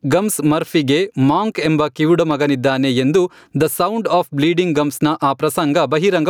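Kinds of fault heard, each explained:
Gain pumping: The level in this speech is pulled down on each loud sound and loud and soft parts end up closer together, swinging by roughly 10 dB throughout the clip. The likely cause is input gain set far too high with a fast limiter or compressor clamping every peak. On a waveform, the peaks sit at a nearly flat ceiling and the gaps fill in with noise. On a spectrogram, the noise floor brightens between syllables and darkens under each one.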